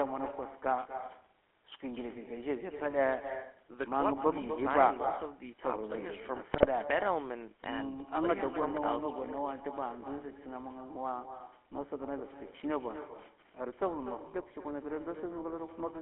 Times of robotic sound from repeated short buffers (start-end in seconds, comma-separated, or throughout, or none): none